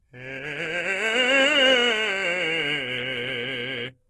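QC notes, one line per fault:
Throughout: Opus compression. The music sounds rough and grainy, with tones turned noisy rather than swirling, and nothing above 12.2 kHz. This is likely Opus music-mode coding at a low bitrate near 16 kbps, filling starved bands with folded or noise content.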